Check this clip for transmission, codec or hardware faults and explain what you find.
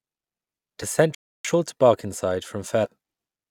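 Three faults are present in this speech clip. Two are damaged data in a compressed stream, and one is a playback stall.

The first burst of damaged data comes at 0.82 s. The second runs from 2.84 to 2.86 s. At each point some bytes of the compressed stream are wrong. The decoder cannot read those frames. It loses its place and hunts for the next valid frame header. Both are heard as a brief disturbance in the speech.

The playback stall runs from 1.15 to 1.45 s, lasting 300 ms. The speech simply stops mid-flow and the output goes silent. Then it resumes. The likely cause is the player running short of data, or its thread being blocked, so nothing reached the output until it recovered.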